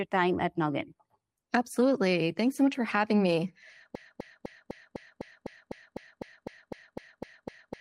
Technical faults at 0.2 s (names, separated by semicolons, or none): none